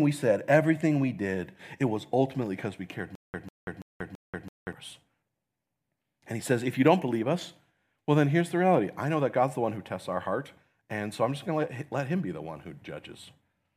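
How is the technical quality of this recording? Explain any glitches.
The recording has one clear glitch, a stutter with silent gaps from 3.15 to 4.73 s, just after "ultimately because we cared". A 147 ms fragment of speech repeats four times, each followed by about 186 ms of dead digital silence, at a steady 333 ms rhythm. This likely comes from a stalled player or stream replaying its last buffer on each retry. Unlike a plain dropout, the same snippet keeps returning, and unlike a seamless loop, true silence separates each repeat. The speech meant for that stretch is lost.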